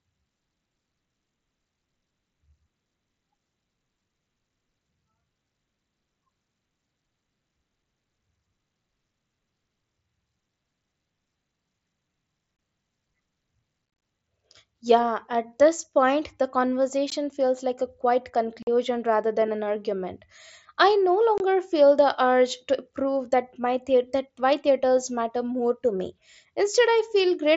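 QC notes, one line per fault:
12.57–12.59 s, unconcealed Bluetooth headset packet loss: about 22.5 ms of headset audio never arrived and nothing was filled in, leaving a brief hole with an abrupt edge.
13.86–14.02 s, unconcealed Bluetooth headset packet loss: drops scattered across 165 ms remove about 105 ms of audio in runs of up to 22.5 ms, chopping the sound into rough crackle.
17.1 s, unconcealed Bluetooth headset packet loss: a 15 ms stretch of packets went missing without concealment, cutting a sharp-edged gap just before "feels like a quiet".
18.63–18.67 s, unconcealed Bluetooth headset packet loss: 45 ms of audio lost and left unfilled between "feels like a quiet" and "rather than an argument", an audible hard-edged dropout.
21.38–21.40 s, unconcealed Bluetooth headset packet loss: 22.5 ms dropped on the wireless link and not patched, a short hole between "an argument I no" and "feel the urge to".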